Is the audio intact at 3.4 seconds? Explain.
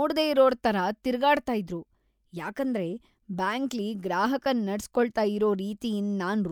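No. A corrupt frame decoded at 3.39 s, between "ತರ ತಿರ್ಗಾಡ್ತ ಇದ್ರು ಯಾಕಂದ್ರೆ" and "ಬ್ಯಾಂಕ್ಲಿ ಗ್ರಾಹಕರನ್ ನಡ್ಸ್ ಕೊಳ್ತಾ", briefly interrupts the speech. Damaged bits in about two compressed frames were played as if valid, putting energy at wrong frequencies. The result is a short blip peaking around -25 dBFS.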